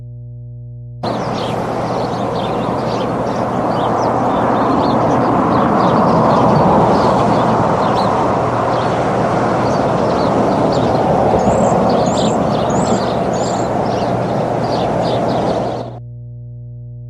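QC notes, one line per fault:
Throughout: mains hum. A steady low tone at 60 Hz sits under the whole clip at a high level, about 15 dB below the signal. Power-line current is getting into the signal path through a ground loop or a transformer close by. On a spectrogram it shows as an unbroken horizontal line at 60 Hz with fainter harmonic lines above it. The waveform carries a constant low-frequency ripple.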